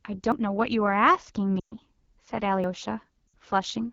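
Throughout, the speech has a rough, raspy edge with a thin, hissy top, the sound of AMR wideband (HD Voice) coding at 8.85 kbit/s, one of its two lowest rates, where the pulse-driven model can no longer shape the voice cleanly below 6.4 kHz.

At 0.32 s there is an abrupt jump in the sound, with no gap of silence. This is likely a dropped buffer (overrun): roughly 40 ms of audio was overwritten before it was collected, and the two sides were butted together.

From 1.59 to 1.75 s the sound drops to near silence within two frames, then returns weak and rough. These are lost AMR speech frames: 120 ms failed to arrive intact, which fits six 20 ms frames, so the decoder stretched the last good settings with falling gain.

At 2.64 s a second skip is heard, again likely a dropped buffer losing around 40 ms.

From 3.28 to 3.34 s a shorter 60 ms loss of frames drops the sound to near silence before it recovers roughly.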